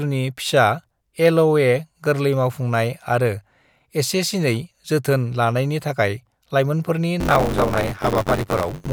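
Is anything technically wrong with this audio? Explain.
Yes, there's buffer tearing from 7.2 s to the end of the clip. The writer filling the playback ring buffer and the hardware reading it have drifted out of step, so they cross inside every period. Most of each buffer ends up holding speech from roughly 20 ms earlier, with a hard splice at each edge. That repeats at 93.8 Hz, which fits a 512-sample buffer, and you hear it as a steady robotic buzz riding on the voice.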